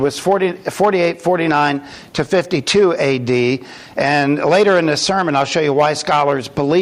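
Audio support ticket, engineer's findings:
Hard clipping, throughout. Peaks cut flat on loud moments, heard as crackle riding each peak. Input driven about 7 dB past what the converter or gain stage can pass. Only a small fraction of samples hit the ceiling, so the damage sits on transients rather than as constant fuzz. The squared tops add upper harmonics, giving the brittle edge on peaks.

Gain pumping, throughout. Gain ducks hard under each loud sound, a swing of around 10 dB. Loud and quiet parts are pulled close together, and the audio sounds squashed. Likely cause: input gain set far too high, with a fast limiter or compressor clamping down on each peak and releasing in the pauses.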